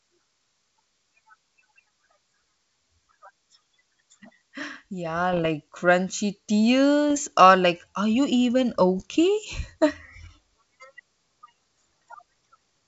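Bit errors on an ADPCM link break into this speech clip three times: 5.33 to 5.48 s, 7.11 to 7.21 s just before "or like are you", and 8.98 to 9.02 s right after "like are you even". Each burst sounds like pops and rough crackle with brief level jumps. A flipped bit derails the decoder's step size and predictor, so the damage rings on for several milliseconds, pointing to an error rate of roughly a few tenths of a percent on the G.722 wideband link.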